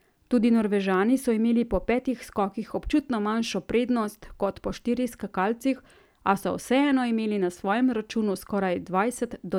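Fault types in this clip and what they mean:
No technical faults are audible in the speech recording, and the signal stays continuous and steady throughout with nothing interrupting or altering it.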